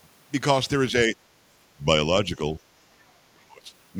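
Speech suppressed in double talk at 0.92–1.17 s and 3.32–3.72 s: the speech dips by about 10 dB, then around 30 dB, likely from echo cancelling during overlapping talk.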